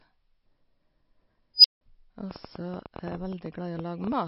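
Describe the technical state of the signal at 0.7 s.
At 0.7 s the speech carries the same damage heard across the whole clip, likely from MP3 compression. Nothing survives above 10.5 kHz. Starved of bits, the encoder, which fits a bitrate near 32 kbps, drops weak frequency lines frame by frame. The result sounds watery and swirly.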